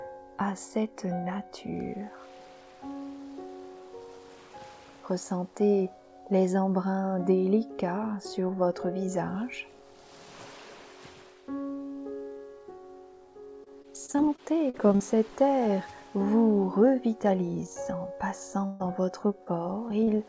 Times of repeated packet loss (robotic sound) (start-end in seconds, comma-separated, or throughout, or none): 13.64-15.02